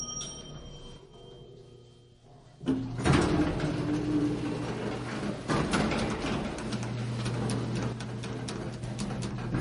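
MP3 compression runs throughout. Nothing is heard above 10.6 kHz, and weak detail swirls and smears, which points to a low bitrate of about 40 kbps and is likely a starved encoder. One channel drops out from 0.98 to 1.13 s and again from 7.93 to 8.83 s. Shared sound falls abruptly by about 6 dB, likely because a lost stereo channel leaves the mono sum at half strength.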